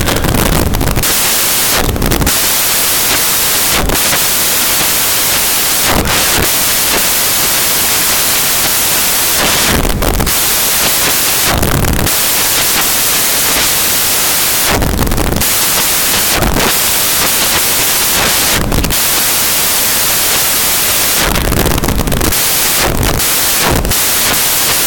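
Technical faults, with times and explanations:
Throughout: samples built from the wrong bytes. Each sample's bytes are assembled in the wrong order or alignment, so the rapidly changing low bits become the largest part of every value. The speech turns into loud, harsh broadband noise.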